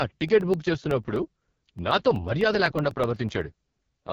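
A short speech recording carries two separate faults. Throughout, it has the heavy coding damage of the AMR wideband (HD Voice) codec at its lowest rate. The voice sounds rough and raspy, with a buzzy, synthetic edge where the codec's pulse-excited vocal tract model cannot follow the real waveform. Nothing is present above 6.9 kHz, and the top band is filled with shaped noise rather than genuine detail. This degree of roughness fits the 6.6 kbit/s mode. From 0.16 s to 4.04 s there are also periodic USB or driver dropouts. A tick cuts into the signal every 0.125 s, around thirty in all, each where roughly a millisecond of audio has been replaced by silence. The strict, even spacing points to a background task stalling the USB bus or audio driver at a fixed interval, so the buffer briefly runs dry on every cycle.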